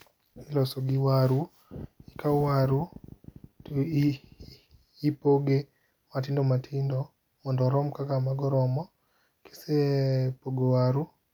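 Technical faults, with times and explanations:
Nothing stood out on listening to the recording.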